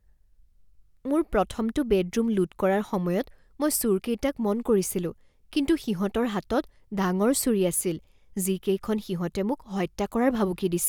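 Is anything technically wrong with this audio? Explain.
No, nothing technically wrong can be heard here.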